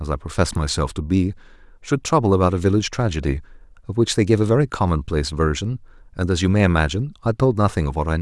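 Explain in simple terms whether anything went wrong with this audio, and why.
Nothing went wrong here; the recording has no audible problems.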